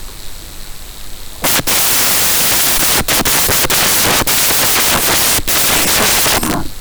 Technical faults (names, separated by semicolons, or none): samples built from the wrong bytes